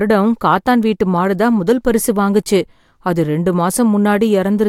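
No technical faults can be heard anywhere in the recording, and the signal stays intact throughout its duration.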